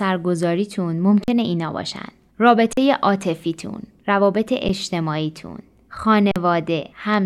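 Speech with an underrun with held sample at 1.24–1.28 s, 2.73–2.77 s, 6.32–6.36 s and, briefly, at 4.68 s. Each time the output buffer runs dry and the converter holds its last value. The sound freezes on a flat level for about 43 ms (fitting a 2048-sample buffer) or 10 ms, then resumes as roughly 40 ms or 10 ms of live audio is skipped. Unlike a dropout to silence, the onset carries little or no click.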